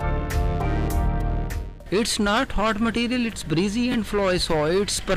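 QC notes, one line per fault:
3.92–3.94 s, chunks out of order: two 10 ms chunks swap places, so one lands a chunk late and plays after the one meant to follow it. Nothing's missing, but the wrong order leaves three hard joins, heard as a brief jumbled moment in the sound.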